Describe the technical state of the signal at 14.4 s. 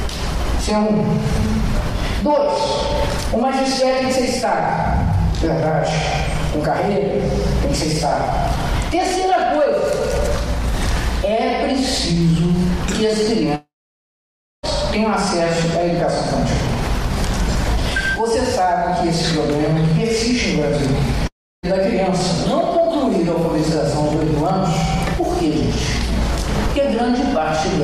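At 14.4 s the signal is in a long network dropout, likely a lost stream, from 13.55 to 14.66 s: a brief fading buzz, then flat near-silent waveform and blank spectrogram.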